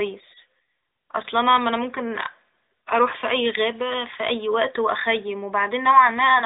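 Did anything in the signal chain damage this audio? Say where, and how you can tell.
No, nothing in the chain damaged this speech; the narrowband mobile codec keeps it to the usual phone band with nothing above about 3.8 kHz, but that's just how the line normally sounds.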